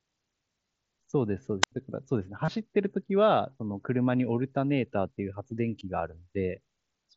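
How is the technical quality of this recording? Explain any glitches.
The speech has three short glitches, all heard through the light graininess and band-limited top of an mSBC Bluetooth headset link.

At 1.62 to 1.72 s there is a wireless microphone squelch dropout: a rise of hiss, then about 83 ms of near silence. The radio signal faded until the receiver's squelch muted its output.

At 2.45 to 2.48 s and again at 5.8 s there is concealed Bluetooth headset packet loss: a brief buzzy held tone with a slight warble as the speech returns. Headset packets were lost, about 30 ms and 15 ms, and the phone filled each gap by repeating recent waveform.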